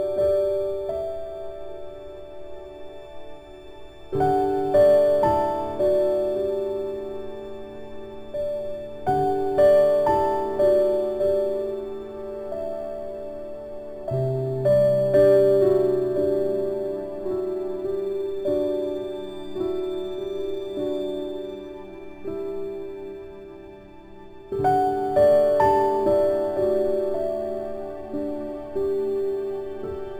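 Crude rate conversion runs through the whole audio: samples appear to have been dropped or repeated rather than filtered, which fits a 48 kHz to 44.1 kHz change. The resulting inharmonic fizz sits roughly 35 dB below the signal and tracks loud and high-frequency content.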